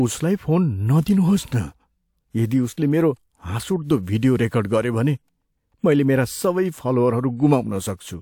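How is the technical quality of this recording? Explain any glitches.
Two brief pre-echo faults affect the speech. The first runs from 1.04 to 1.06 s and spreads about 27 ms. The second runs from 2.73 to 2.77 s and spreads about 42 ms. A transform codec spreads its coding noise across a whole block. Here sharp onsets sit late in their blocks. Noise meant for the loud attack leaks into the quiet gap before it. Each attack is preceded by a short hiss and sounds softened.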